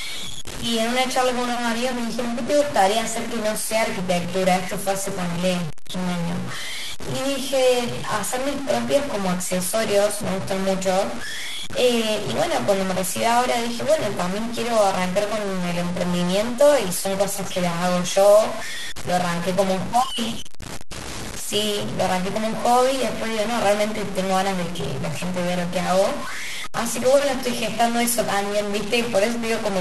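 From start to finish the speech carries a harsh, buzzy grit, and the pauses are filled with steady noise instead of falling silent. That pattern is likely a stuck bit, with one converter or data line held fixed so that about half the samples jump by a step of around -25 dBFS. Unlike clipping, the distortion doesn't track loudness peaks, and it persists in the quiet gaps, where small values crossing zero keep flipping against the stuck bit.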